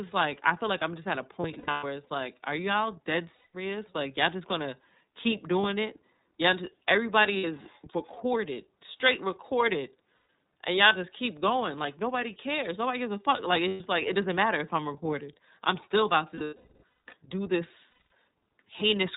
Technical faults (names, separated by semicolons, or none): iLBC codec; lost iLBC frames